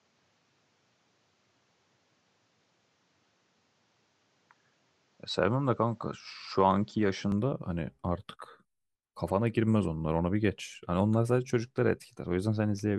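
Speech that sounds band-limited and dull from 0.0 to 7.32 s, then opens up with no gap or level jump, likely an input switched to a poorer device. A spectrogram shows nothing above 8 kHz until 7.32 s, with a faint noise floor roughly 40 dB down.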